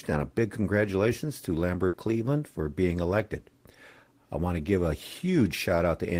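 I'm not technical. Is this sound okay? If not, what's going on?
No. At about 1.87 seconds there is a burst of packet loss. A short run of the data carrying this speech across the network was lost or arrived too late to be played. The receiving end covered the hole by stretching the last sound it had for about 60 ms and letting it fade, so you hear a brief held buzz or hiss until 1.96 s. The speech then jumps ahead, with about 60 ms of it missing.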